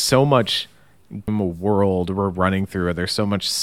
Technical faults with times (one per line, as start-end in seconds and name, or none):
1.28 damaged data in a compressed stream